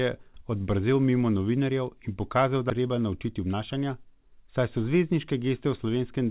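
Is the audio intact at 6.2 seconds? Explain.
Yes, the speech at 6.2 seconds is intact, with no fault there beyond the call codec's normal narrowband sound, which has nothing above 4 kHz.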